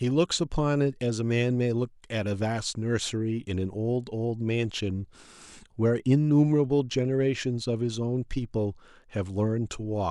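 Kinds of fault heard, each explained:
Channel delay (comb filtering): from 3.16 s to the end, the speech loses some of its airy top end. One channel arrives a tiny fraction of a millisecond after the other, which fits a lag of about one sample, and summing the two to mono cancels their shared content where they fall out of phase. With so short a delay, the first notch sits up near 20 kHz, giving a gentle dulling of the highest frequencies rather than an obvious hollow tone.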